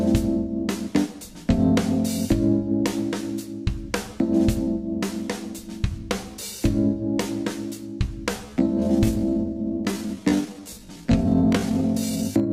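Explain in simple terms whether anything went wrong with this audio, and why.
From 8.41 s to the end, a time-stretched section slows the sound to 0.65× pace at the same pitch, so it drags, likely from software fitting a set length.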